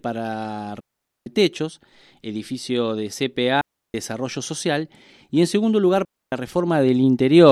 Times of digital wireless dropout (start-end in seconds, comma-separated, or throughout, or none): 0.80-1.26, 3.61-3.94, 6.05-6.32